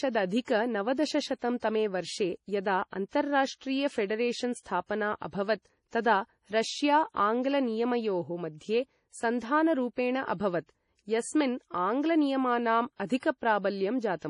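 MP3 compression runs throughout the speech: everything above about 10.6 kHz is missing, and the audio has a watery, swirling quality with smeared consonant attacks. This is likely heavy MP3 encoding at a low bitrate around 32 kbps, where weak frequency lines flicker on and off between frames.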